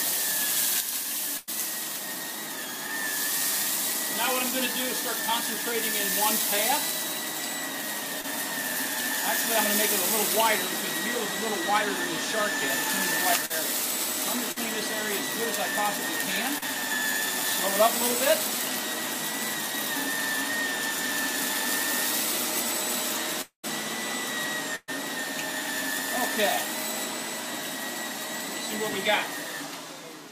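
At 1.37 s a burst of packet loss cuts out about 100 ms of audio. The receiver bridges the hole by extending the last sound it had and fading it down through the gap, so 1.37 to 1.49 s is a held, dimming continuation rather than real signal. The sound then picks up from a point further on. The missing stretch is gone rather than delayed.

Short concealed packet loss follows at 8.21, 13.46, 14.52 and 16.58 s. Each time a few packets miss their deadline: about 20 ms at 8.21 s and about 40 ms at the other three. The decoder patches each hole with a brief synthetic extension of what came before and crossfades back into the live stream. The result is a quick smear or wobble.

From 23.41 to 23.65 s a long network dropout leaves about 220 ms unplayed, most likely because nothing arrived from the network for that stretch. The last sound carries on as a decaying buzz or hiss. For roughly the final tenth of a second it has died away to silence before the audio returns, skipped ahead past the lost section.

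A second burst of packet loss at 24.76 s removes about 120 ms. The concealment stretches and fades the preceding sound through most of the span to 24.90 s. About 30 ms of silence follows before playback resumes, with that material missing.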